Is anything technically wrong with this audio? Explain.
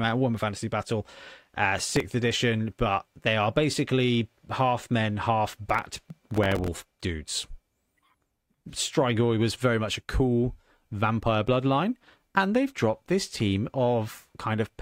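Yes. Processor overload crackle appears twice, from 1.79 to 2.00 s and again, longer, from 5.70 to 6.91 s. The processor is falling behind on very short audio buffers, roughly 1.5 ms each, and every missed deadline replays a stale fragment of earlier audio with hard edges. Around ten such misses in the first burst and several dozen in the second pile up into a gritty, tearing crackle over the speech that stops once the load eases.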